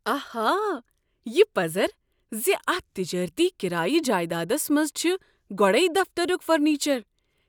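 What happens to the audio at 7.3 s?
Nothing goes wrong at 7.3 s: the speech plays through intact at that moment, with no dropout, click or distortion.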